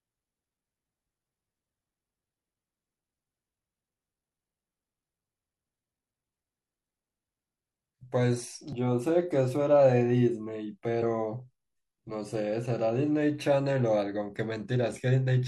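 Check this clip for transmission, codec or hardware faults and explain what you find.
Two faults turn up in the speech, both damaged data in a compressed stream. The first is a single brief event at 8.73 s; the second runs from 10.99 to 11.03 s, about 44 ms. At both points part of the compressed data is wrong, so the decoder misreads those frames, loses sync and hunts for the next valid frame header. The result is a short chirp or blip that breaks the speech. On a spectrogram each appears as a narrow vertical smear of broadband or oddly banded energy unrelated to the surrounding harmonics. In the waveform the second shows a 44 ms stretch of jagged, mismatched samples with abrupt edges, and the first a single sharp discontinuity.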